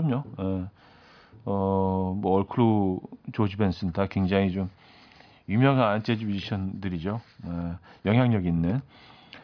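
Speech recording with no technical faults to be heard.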